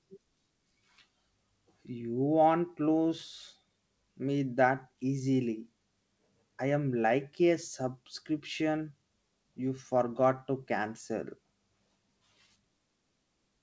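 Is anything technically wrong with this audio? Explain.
No, nothing in this speech clip points to a technical fault. It has come through a call connection, and the audio stops at 8 kHz, which fits a wideband call codec such as G.722.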